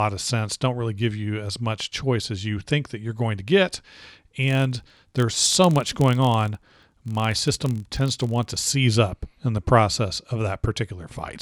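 From 4.44 s to 8.66 s, starting just before "up in the process", the speech carries a buzz at about 43.1 Hz from a filter restarted on every block. The filter drops its stored state at each block boundary and begins again from silence, so every block opens with a small transient. These repeat as a steady rasp whose loudness tracks the speech level. The rate fits 1024-sample blocks at 44.1 kHz.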